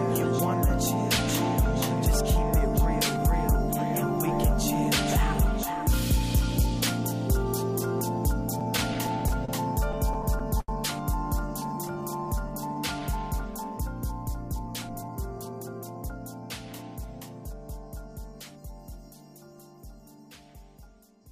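From 8.59 to 9.51 s and again from 9.92 to 10.71 s the audio drags and stutters. These are repeated stalls (stutter): packets arrived late, the jitter buffer ran empty seven and then five times, and the receiver extended the last sound for up to 31 ms and 80 ms until it could continue, with nothing lost. From 11.74 to 13.00 s the sound is drawn out to 93% speed at unchanged pitch. This is a jitter buffer slow-down, in which repeated pitch periods added 96 ms to rebuild the reserve. From 14.88 to 16.10 s the audio sounds hurried at 112% speed with the same pitch. This is a jitter buffer speed-up: about 150 ms was cut away in short pieces to reduce an excess of buffered delay.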